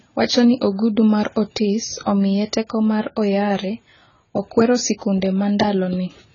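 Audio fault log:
throughout: AAC compression. Dull, smeared speech with nothing above 7 kHz and fizzy, warbling sibilants, likely from AAC-LC coding starved of bits, consistent with about 16 kbps.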